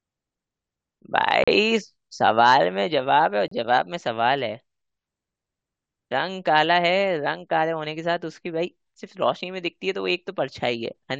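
Speech, interrupted twice by a gap between stream segments: hard-edged silences at 1.44 to 1.48 s (38 ms) and 3.48 to 3.52 s (about 33 ms). Their spacing, roughly 2 s apart, matches a 2.0 s segment length, so each hole sits at a segment boundary where the timestamps of adjacent segments fail to meet and the player pads the space with silence. No audio is removed; the timeline is simply stretched by the inserted gap.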